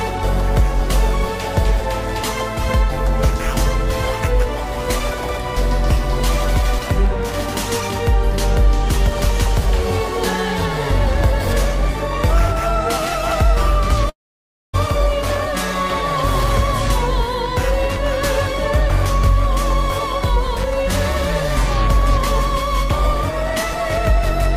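A long network dropout runs from 14.09 s to 14.75 s, roughly 0.64 s of audio that never arrives. The last sound before the gap is stretched into a brief buzzy or hissy tail that fades within a few hundredths of a second, leaving about 0.59 s of near-silence. Playback then resumes further along, with the missing stretch simply skipped. The likely cause is a burst of lost packets that the receiver papered over with concealment before muting.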